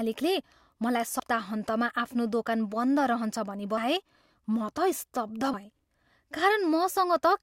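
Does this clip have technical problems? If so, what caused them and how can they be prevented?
Yes. Compressed frames were skipped at 1.19–1.21 s and 5.53–5.56 s: the decoder dropped damaged or missing frames, which fits a 20 ms frame length. The speech jumps forward, losing roughly 100 ms and then roughly 70 ms. To prevent it, verify file integrity and use error-protected transport or packet-loss concealment.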